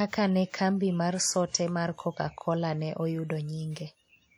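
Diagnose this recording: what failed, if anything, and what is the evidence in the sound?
Codec stage, likely WMA compression: the whole speech clip rings and washes, with hiss breathing alongside the voice, pointing to an early WMA encoder at roughly 48 kbps.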